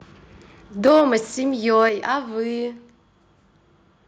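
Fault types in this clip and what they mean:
Microphone overload: the tops of the loudest peaks are flattened against the converter's ceiling, likely from input gain set too high. From 0.85 to 1.02 s the level runs about 4 dB past full scale with many samples clipped, adding a harsh crackle. From 1.79 to 1.87 s a milder overshoot of about 2 dB does the same.
Microphone volume stepped down: voice and background both drop in level suddenly, in a single step, likely because the call software cut the device's input gain after detecting clipping. The first drop, at 0.88 s, is about 3 dB. The second, at 1.89 s, is about 6 dB, just after the second distorted peak.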